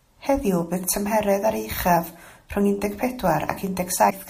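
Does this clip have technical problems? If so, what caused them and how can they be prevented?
Yes. From 4.06 to 4.12 s, damaged data in a compressed stream produces a brief glitch near the end of the speech. The decoder misreads corrupted frames and loses sync while searching for the next header, whereas a plain dropout leaves silence. Checksum-verified transfers and storage prevent it.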